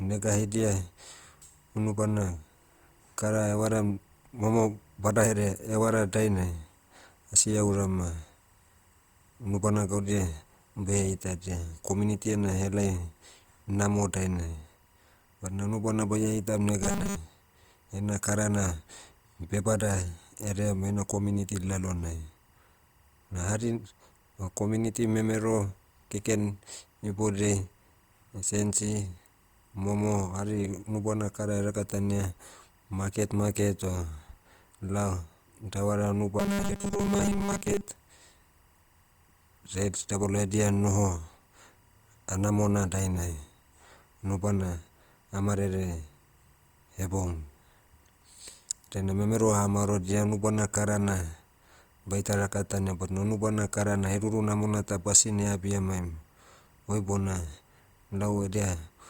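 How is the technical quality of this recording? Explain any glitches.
The recording has two problems: a constant timecode leak and two short bursts of robotic buzz.

Timecode bleed runs through the whole clip. Linear timecode at 24 frames per second is leaking in from a nearby track or cable. Its square wave flips between tones near 1 and 2 kHz. The result is a faint chirping warble, about 40 dB below the speech.

Robotic sound from repeated short buffers occurs from 16.83 to 17.16 s and from 36.40 to 37.88 s. The likely cause is audio arriving too slowly. The software loops a tiny slice while most of the real audio is skipped. The repeats impose a rigid 200 Hz buzz, which fits a 5 ms buffer. The speech turns metallic but still loosely follows the words.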